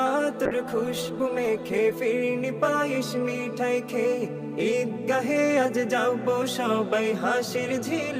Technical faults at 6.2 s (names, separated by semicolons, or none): none